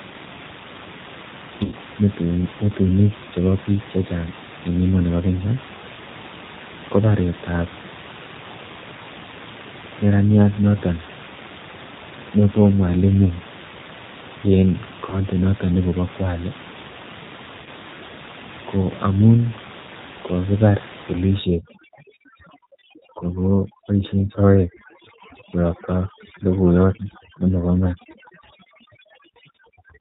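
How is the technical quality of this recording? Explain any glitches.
Technical quality is fair at best: it's a narrowband call sound with three short dropouts and, from about 21.4 s, heavy-handed noise reduction. The room noise sits about 15 dB under the speech, which is ordinary room sound rather than a fault.

G.729 codec: The whole clip carries clearly audible G.729 coding. At 8 kbit/s it rebuilds speech from a vocal-tract filter, pitch predictor and a few pulses, so nothing above 4 kHz survives. That gives the dull, slightly rough, synthetic edge.

VoIP packet loss concealed by the speech codec: At 1.64–1.75 s, 15.10–15.20 s and 17.62–17.69 s, roughly 80, 20 and 40 ms of audio went missing. The decoder stretched its last pitch and filter settings while fading the gain, giving a brief buzzy or noisy smear that stays a little weak as it recovers.

Overdone noise removal: From 21.39 s to the end, a noise reducer is clamping bands it judges to be noise. 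It does this so aggressively that the background drops and breaks up into twinkly specks, and quieter speech detail gets cut too.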